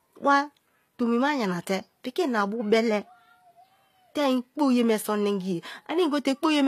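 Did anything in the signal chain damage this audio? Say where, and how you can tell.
Yes, at the codec: sibilants sound gritty throughout, likely from HE-AAC compression. A spectrogram shows replicated, smeared treble ending abruptly at 14.9 kHz.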